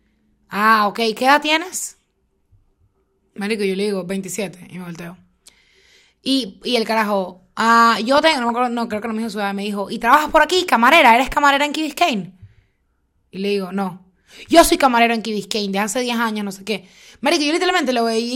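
DAB burbling occurs at 8.15 to 8.50 s, after "el carajo ah", and 10.6 to 10.7 s, after "trabajas por". Bit errors escape correction, so sub-bands jump. It puts short blips of noise into single sub-bands.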